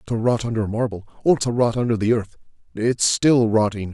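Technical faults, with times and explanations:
No technical faults can be heard in this speech clip. There is nothing to report by time or by cause.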